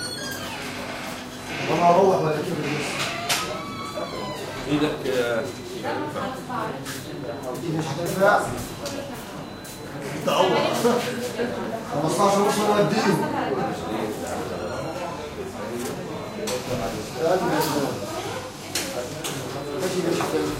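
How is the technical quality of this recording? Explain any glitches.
No technical faults or glitches are audible anywhere in this recording of everyday sounds.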